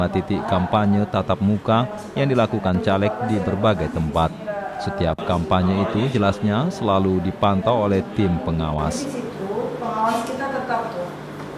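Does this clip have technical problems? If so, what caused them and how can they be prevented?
No, there's nothing technically wrong to flag in this recording, so there's no cause to trace and nothing that needs preventing.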